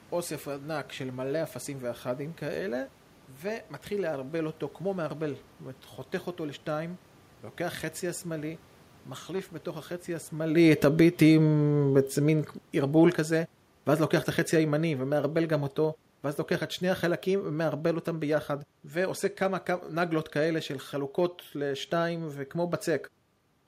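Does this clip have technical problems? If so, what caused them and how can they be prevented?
Yes. From 10.56 s to 16.07 s the automatic gain falling shows up: the automatic gain control judged the input too loud and pulled its gain down gradually by about 8 dB, so the speech and the room noise behind it sink together. This comes just as the talker shifts position around 10.5 s. Setting a fixed input gain with enough headroom, or slowing the gain control's attack, would prevent it.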